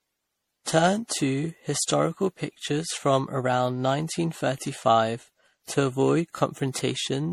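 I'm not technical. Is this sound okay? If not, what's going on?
No. Throughout, the speech sounds swirly, hollow and smeared, with blurred starts to sounds. That suggests generation loss, likely from compressing it over and over, not just once.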